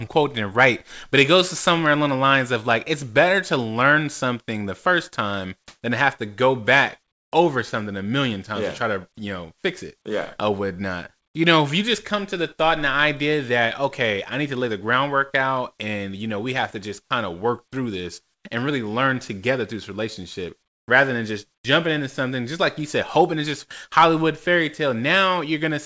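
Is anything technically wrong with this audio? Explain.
Yes. At 5.68–5.82 s and 18.34–18.44 s the quiet background between phrases is replaced by comfort noise, a steady, featureless hiss lasting 140 ms and then 100 ms. The likely cause is discontinuous transmission: the sender's voice detector stopped sending sound and the receiver synthesised noise shaped like the background. The real background sits about 56 and 51 dB below the loud parts, and the patches are about 23 dB louder in the first case and about 13 dB quieter in the second.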